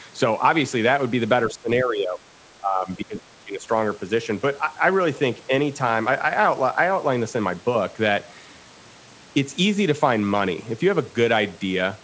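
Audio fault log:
1.50–3.64 s, speech suppressed in double talk: the voice dips and breaks up, dropping by around 20 dB, for about a second and a half in total. This is likely the echo canceller turning down both talkers at once.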